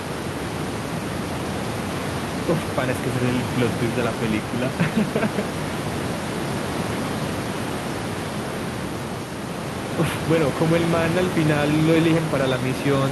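No system faults are audible in this speech recording; the only thing under it is the room's own background noise, about 6 dB below the speech.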